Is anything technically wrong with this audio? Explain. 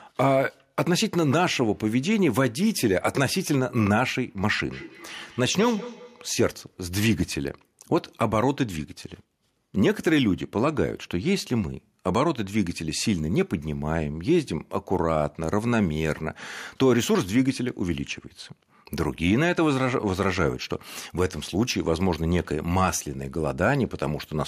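Yes. From 4.72 to 6.38 s the speech has feedback echo between two devices: a second device in the room replays what this microphone sent, and the microphone picks it up again, which this device's echo canceller cannot remove. Each word returns roughly a fifth of a second later, thinner and more ringing, peaking at about 17 dB below the speech. A waveform shows faint copies trailing each syllable at that spacing, and a spectrogram shows repeated, blurred stripes.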